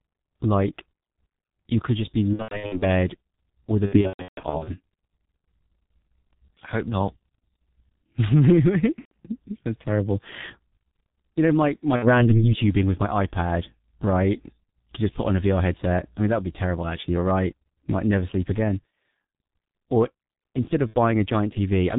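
Speech passed through the G.723.1 codec throughout sounds muffled and hoarse, with smeared consonants, and a spectrogram shows nothing above 4 kHz, which fits a low rate of around 6 kbit/s. VoIP packet loss concealed by the speech codec stretches the voice into a fading buzzy tone or coloured noise at 2.33–2.85 s, 3.86–4.74 s, 8.99–9.12 s, 11.96–12.32 s and 20.87–20.94 s. On a waveform these show as decaying, repetitive stretches where the decoder extended its last pitch and filter with shrinking gain.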